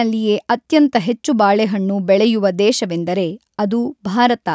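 No faults in this speech; the call microphone processing is audible only as the expected trim of the lowest bass and a band limit at 8 kHz.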